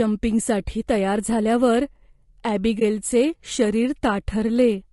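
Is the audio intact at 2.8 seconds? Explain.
No. There is AAC frame loss with muting from 2.79 to 2.82 s. A stretch of coded data went missing, roughly 20 ms of audio, which fits a single lost frame. The decoder filled the gap with silence rather than guessing. Because its overlapping windows blend each frame into the next, the speech fades down into a brief dropout and back up again. The result is a brief dip.

Under that gap, and through the whole clip, the speech sounds rough and grainy. There is noise filling the spaces between harmonics and a thin, somewhat artificial top band. This is plainly audible damage, likely from low-delay AAC compression of the AAC-ELD kind used in video calls. The texture fits a bitrate around 32 kbps, too little for such frames to stay clean.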